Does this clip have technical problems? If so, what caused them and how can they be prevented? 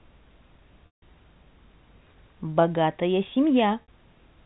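Yes. Packet loss with pitch repetition at 0.86 to 1.02 s and 3.82 to 3.88 s: the receiver loops the last pitch period, giving a buzzy hold that fades toward silence. Preventing it calls for a steadier network path, forward error correction, or a larger jitter buffer.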